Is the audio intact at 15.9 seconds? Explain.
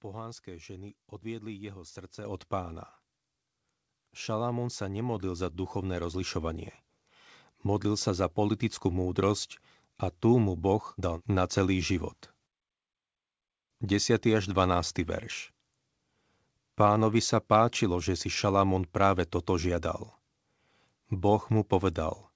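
Yes, the audio is intact at 15.9 seconds, with only the normal character of the call path, whose band stops at about 8 kHz, as fits a wideband codec such as G.722.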